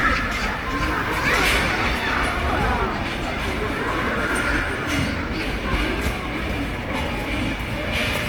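A recording of sounds, coarse and grainy from start to finish: tonal parts turn rough and noisy, and the texture has a gritty, noise-filled quality with few swirling gaps, even though the content still reaches to about 20.1 kHz. The cause is likely Opus compression in its music (CELT) mode, at a rate that fits roughly 24 kbps. Starved of bits, the encoder fills bands with folded or noise content, leaving plainly audible damage.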